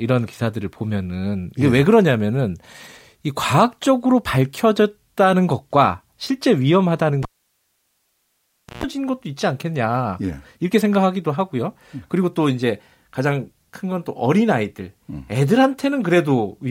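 At 7.23 s the speech drops out with a pop as the cable gets pulled, leaving near silence for about 1.56 s. Then there's a roughly 130 ms burst of 60 Hz mains buzz while just the tip touches, and another pop at 8.84 s as it seats.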